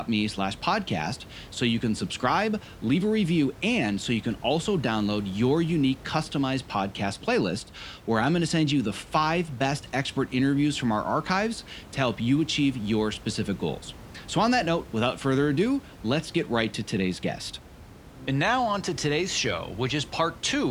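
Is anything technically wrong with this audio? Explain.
No, nothing is technically wrong with this audio.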